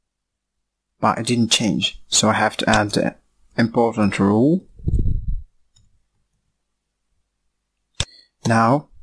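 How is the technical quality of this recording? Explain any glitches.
No dropouts, distortion, clicks or other glitches are audible anywhere in the recording.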